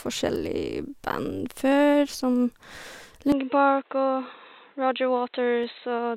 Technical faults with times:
1.72 dropped samples
3.32-6.16 input switched to a poorer device
5.64 dropped samples

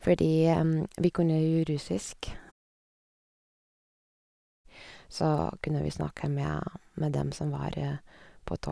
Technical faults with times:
none

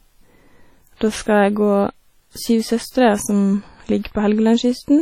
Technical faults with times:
0.00-5.02 WMA compression

